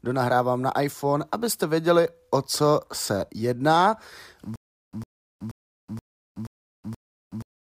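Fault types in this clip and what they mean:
Stutter with silent gaps: a likely stalled stream replays one 106 ms fragment, then dead silence, every 478 ms, not a continuous loop.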